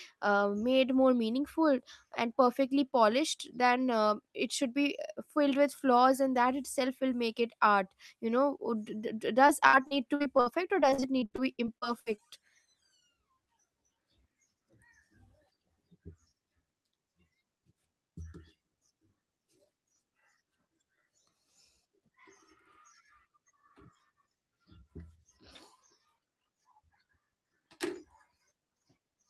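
From 9.47 s to 12.20 s the speech turns choppy, with small pieces missing. This is repeated packet loss: short gaps, the longest 62 ms, kept recurring, each patched by extending the preceding sound, concealing 22% of that stretch.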